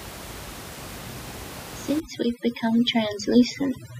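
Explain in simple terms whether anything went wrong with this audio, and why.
Something did go wrong, starting at 2.0 seconds and lasting to the end of the clip: overdone noise removal. Up to then, the room noise sits steadily under the speech. After that point, a cleanup tool set far too hard strips out that noise along with the softer parts of the voice, leaving near silence with tiny twinkling specks. A simple mute would leave clean silence, not that sparkle.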